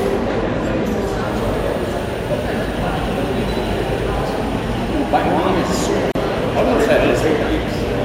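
A recording of everyday sound with a gap at a join of encoded pieces: at 6.12 s the audio drops into silence for 37 ms and resumes at 6.15 s exactly where it left off. The pieces were encoded separately, about 10 s each, and joined without trimming the encoder's start delay and end padding. Unlike a dropout, nothing is skipped, and the gap's edges are softly smeared rather than hard clicks.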